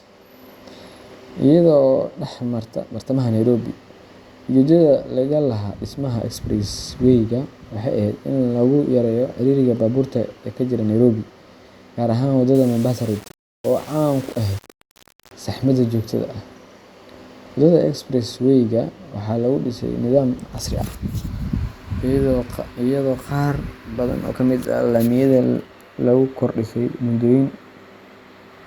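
From 12.55 to 15.32 s, just before "saxmada joogtada", the speech turns grainy and gritty. The roughness rises and falls with the voice, and the quietest stretches break up or sputter instead of fading smoothly. This is low bit depth without dither. The likely cause is the signal being rounded onto very few levels, which fits about 6 bits, with no added noise to smooth the steps. The error therefore follows the speech, sitting roughly 25 dB below it.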